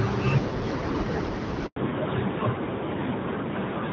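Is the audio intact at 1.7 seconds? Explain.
No. There's a handover gap from 1.66 to 1.76 s: the call jumped networks and no speech frames arrived, so the sound cuts to silence for about 100 ms. When it comes back, there's a fallback to narrowband. From 1.76 s on, the clean wideband HD Voice sound drops to an older narrowband codec. Everything above 4 kHz disappears, so it sounds duller and rougher.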